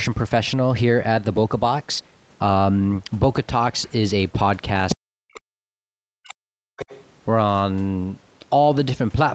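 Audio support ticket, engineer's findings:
Other side's voice leaking through, 4.89–4.96 s and 6.79–7.08 s: far-end scraps at about -5 dB, then about -20 dB relative to speech. Likely incomplete echo cancellation of loudspeaker playback.

Speech suppressed in double talk, 4.95–6.81 s: talker's speech dips by up to about 40 dB, nearly cut out. Likely echo canceller attenuating both sides during overlap.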